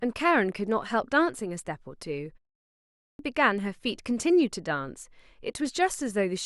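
A speech recording in which, at 2.79 s, talking resumes after a half-second pause with its opening missing: the sound snaps in abruptly out of silence at 3.19 s, about 0.4 s having been swallowed. This is a clipped start after a pause. During the 0.49 s gap the output device went to sleep, and it needed roughly 400 ms to wake and lock again, so everything arriving in that window was lost before playback resumed.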